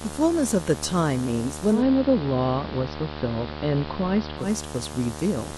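Video or display buzz runs through the whole clip: a screen or video cable is coupling into the audio, producing a 75 Hz buzz at the picture's field rate with hash above it, loud, roughly 10 dB below the speech.

Digital radio blending to analogue occurs from 1.70 s to 4.50 s. The receiver lost its digital stream and cross-faded over about 140 ms to the AM broadcast, so treble is reduced, hiss rises to around 25 dB below the speech, and level shifts by about 2 dB.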